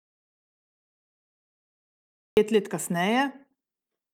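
From the very start until 2.37 s the speech is replaced by silence, with no room tone at all, an audio dropout to silence already under way when the clip begins. The input was likely lost while the recorder kept writing silence; speech resumes abruptly on "pet let".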